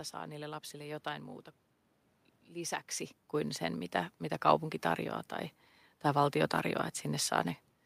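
No technical faults are audible.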